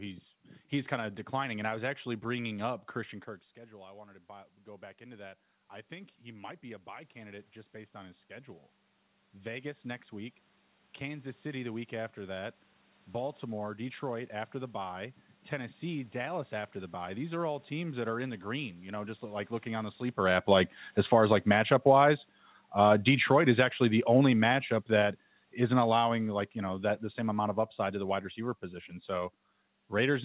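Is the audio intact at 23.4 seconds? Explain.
No. At 23.4 seconds the speech is caught in an automatic gain falling fault. It runs from 20.18 to 28.12 s. The automatic gain control judged the input too loud, or its background noise too strong, and began turning its gain down, by about 12 dB in total. So the level keeps sinking through this stretch. The speech and the room background fade together, which is how a gain change differs from a talker simply moving away.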